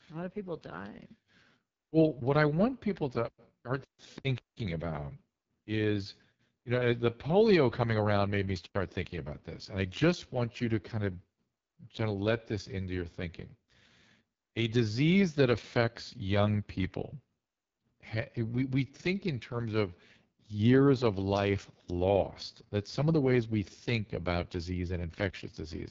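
Throughout, the speech carries AMR wideband (HD Voice) codec damage. It sounds rough and raspy, which fits the lowest 6.6 kbit/s rate. Nothing reaches above 7.5 kHz.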